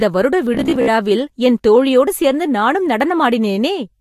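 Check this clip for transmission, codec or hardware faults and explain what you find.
There's one fault: robotic sound from repeated short buffers, 0.55 to 0.91 s, right before "என் தோழியோடு சேர்ந்து நானும்". The speech turns into a rigid, metallic 66.8 Hz buzz, likely from about 15 ms chunks being replayed while fresh audio lagged, with roughly half the stretch repeated.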